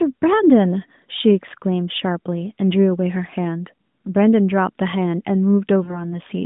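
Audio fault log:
5.84 to 6.01 s, lost AMR speech frames: near the end, two 20 ms frames (about 40 ms) went missing. The AMR-NB decoder, with its 150 Hz to 3.7 kHz band, replayed the last pitch and vocal-tract settings at falling gain, so the speech smears, fades, and comes back rough.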